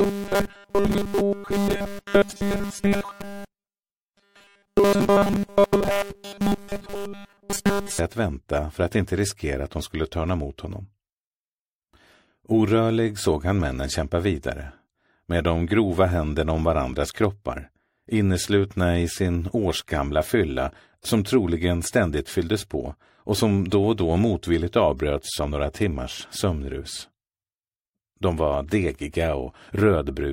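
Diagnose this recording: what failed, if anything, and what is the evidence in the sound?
From 0.01 s to 7.99 s the sound becomes a rigid metallic 200 Hz buzz, likely robotic sound from repeated short buffers at the driver or buffer stage, which fits a 5 ms buffer.

At 28.89 s a brief blip peaking around -25 dBFS is a corrupt frame decoded: damaged codec data, about two frames, played with energy at the wrong frequencies.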